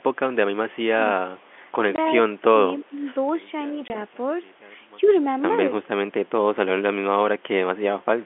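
From 1.16 to 1.33 s the speech dips by about 20 dB, consistent with speech suppressed in double talk: the echo canceller likely mistook overlapping far-end activity for echo and attenuated the near talker. At 1.42 to 1.51 s a faint echo leak follows, a copy of the voice delayed by 301 ms and roughly 40 dB down, likely residual loudspeaker pickup that the canceller failed to remove.

At 1.96 s a 20 ms hole with hard edges is packet loss filled with silence: one packet never arrived and the receiver played silence instead.

From 2.47 to 3.07 s a longer, likely double-talk suppression pulls the speech down by about 15 dB over roughly half a second.

From 3.29 to 5.44 s the level falls by 27 dB, the signature of one channel inverted. With one stereo channel likely polarity-flipped, the centred content cancels in the mono sum, leaving only the channel difference. A second 20 ms silence-filled packet loss falls inside this stretch at 3.88 s.

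At 5.02 to 5.17 s the likely echo leak returns, again 301 ms behind the original but stronger, about 25 dB below the speech. It overlaps a brief, likely double-talk dip of about 5 dB at 5.03 to 5.09 s.

The narrow 250 Hz to 3.4 kHz line band of the G.711 telephone coding is audible throughout.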